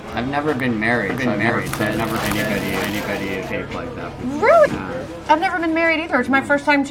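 At 1.10 s a doubled audio track kicks in: a second copy of the same sound appears about half a second behind the first, at roughly the same loudness. It's a clean, full-band repeat with no decay or room colour, and it cuts in and out abruptly, ending at 3.51 s. The likely cause is a second, slower capture path feeding the same mix, or an edit holding two copies out of step.

Inside that doubled stretch, at 1.49 s, there's a short blip from damaged data in the compressed stream. Some of the encoded bytes were wrong, so the decoder misread those frames, lost its place and skipped ahead to the next frame header it could lock onto. The same thing happens again from 4.65 to 4.67 s, a brief glitch.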